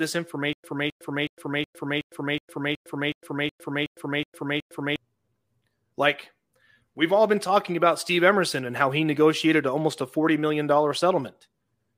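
From 0.53 s to 4.96 s the speech stutters: a fragment about 263 ms long plays, drops into about 108 ms of dead digital silence, then returns, twelve times at a steady 370 ms period. This stutter with silent gaps likely comes from the player or stream stalling, replaying its last buffered fragment on each retry before running empty, so the speech that belonged in that stretch never arrives.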